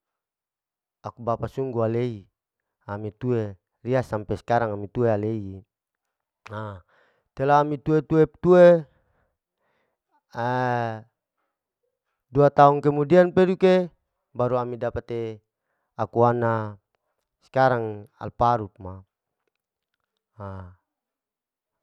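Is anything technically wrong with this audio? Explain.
No, nothing technical stands out here; the speech comes across without any audible problems at all.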